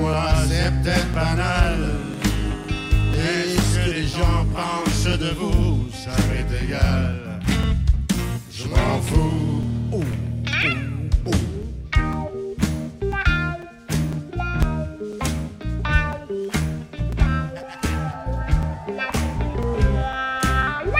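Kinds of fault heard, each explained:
Periodic USB or driver dropouts: something in the background is stalling the USB bus or the audio driver on a fixed schedule, so a few milliseconds of sound get swapped for silence each time. Here it's a steady tick every 0.5 s, running from about 0.14 s to 20.63 s, around forty of them in all. Each gap is only a few milliseconds, but the hard cut to silence makes it pop out wherever there's signal.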